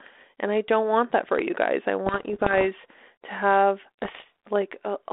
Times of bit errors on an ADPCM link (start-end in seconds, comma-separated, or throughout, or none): 2.06-2.67, 3.99-4.24